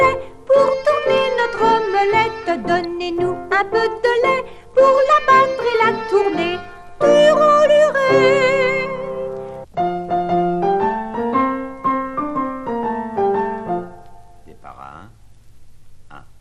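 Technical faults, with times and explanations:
throughout, MP2 compression: dull, gurgling, granular sound, likely from MP2 coding at around 80 kbps starving upper sub-bands; a spectrogram shows high bands flickering on and off.
6.89 s, DAB burbling: a few brief watery blips as sparse bit errors put short bursts of noise into single sub-bands; the spectrogram shows isolated bright blocks, and the waveform shows a small burst.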